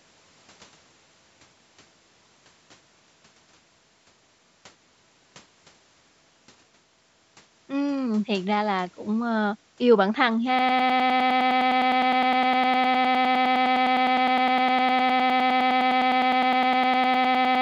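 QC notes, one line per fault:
10.59 s to end, broken-record loop: a 102.4 ms fragment of speech repeats exactly, back to back, about ten times a second until the clip ends, giving a rapid stutter in place of the speech that should follow. The likely cause is a stalled player, encoder or stream replaying its last held fragment. On a waveform, identical 0.1 s blocks tile the whole tail. On a spectrogram, vertical stripes repeat at that spacing, topping out at 8 kHz like the rest of the call audio.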